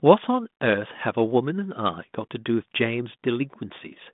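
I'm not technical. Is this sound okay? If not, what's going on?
Yes, nothing here is faulty.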